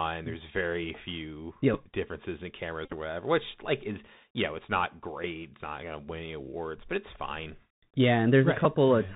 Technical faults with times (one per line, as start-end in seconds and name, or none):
0.00-9.16 Bluetooth CVSD headset codec
1.74 Bluetooth headset packet repeated
2.85-2.93 Bluetooth headset packet repeated
8.65 Bluetooth headset packet repeated